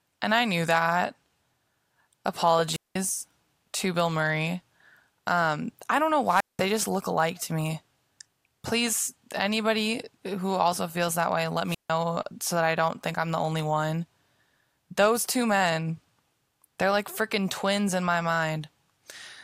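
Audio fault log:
2.69–2.96 s, 6.24–6.68 s and 11.65–11.91 s: wireless microphone squelch dropout. Each time the speech gives way to a brief swell of hiss or static, then near silence lasting 193 ms, 189 ms and 153 ms in turn, before the speech returns. The analogue FM radio link fades, the receiver's noise rises as signal strength falls, and its squelch then mutes the output until the carrier recovers.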